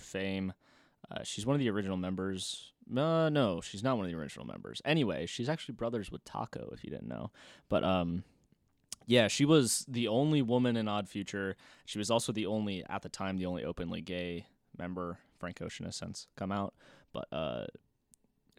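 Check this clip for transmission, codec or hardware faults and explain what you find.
No faults can be heard anywhere in this speech.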